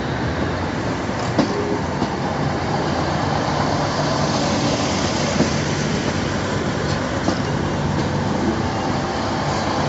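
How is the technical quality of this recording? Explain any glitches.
Nothing stood out on listening: the audio carries the narrowed band of a call path, with no content above about 8 kHz, and no glitches appear anywhere in it.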